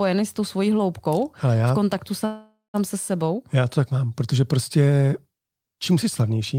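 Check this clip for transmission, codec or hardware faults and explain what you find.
There is one fault, a call audio freeze, from 2.25 to 2.76 s. The likely cause is late packets draining the jitter buffer, so the receiver ran out of audio and filled in. It continues the last sound as a decaying buzz or hiss, which ends in about 160 ms of silence. The filled stretch lasts about 485 ms. Playback then resumes where it stopped, so nothing is lost, but everything after it arrives 485 ms later.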